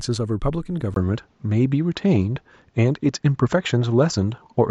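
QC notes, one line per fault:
0.94 s to end, input switched to a poorer device: after a 20 ms silence the speech turns duller, shifts a few dB in level and gains faint new background noise. A spectrogram shows nothing above 7.6 kHz, and the waveform a brief flat gap, likely from a microphone change.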